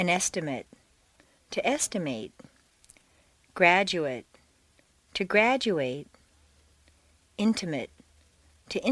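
Nothing technically wrong turns up anywhere in this one, so there's no fault to point to and no cause to explain.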